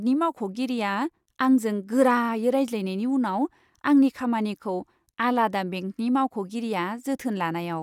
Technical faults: none

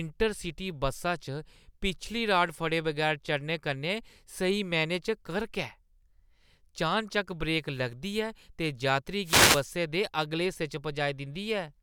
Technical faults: wireless microphone noise hit

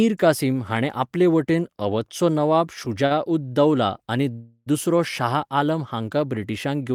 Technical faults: repeated stalls (stutter); call audio freeze

